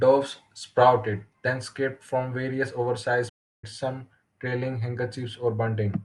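The player most likely ran out of buffered data, or its playback thread was blocked, causing a playback stall at 3.29 s. The speech cuts off mid-flow and the output falls silent for about 0.34 s, resuming at 3.64 s.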